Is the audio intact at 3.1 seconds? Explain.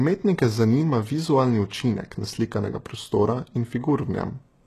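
No. At 3.1 seconds, as throughout the clip, the treble sounds gritty and metallic, s sounds come out lispy, and nothing reaches above 12.3 kHz. The likely cause is HE-AAC compression at a low bitrate, near 16 kbps, rebuilding the treble by copying lower bands upward, so its harmonics fail to line up with the originals.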